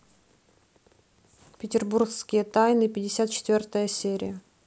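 A speech recording, with nothing technically wrong with it.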